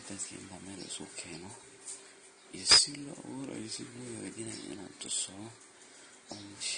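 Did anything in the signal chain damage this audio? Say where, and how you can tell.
Yes. Transcoding between lossy codecs runs throughout, at the codec stage. Nothing survives above 9.7 kHz, and two kinds of smeared, warbling artefact sit on top of each other. That is likely an Opus-style encode re-encoded as low-bitrate AAC-LC, each pass compounding the last.

Integer overflow hits from 2.71 to 2.78 s, in sample-format conversion or a gain stage. Peaks driven about 3 dB past full scale wrapped to the opposite extreme instead of clipping, producing a violent crack far harsher than ordinary clipping distortion.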